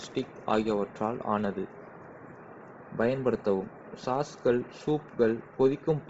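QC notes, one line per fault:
throughout, Bluetooth LC3 compression: likely a low-bitrate LE Audio link, fitting roughly 24 kbps, discarding upper spectrum; speech turns breathy and grainy, with nothing above 7.7 kHz.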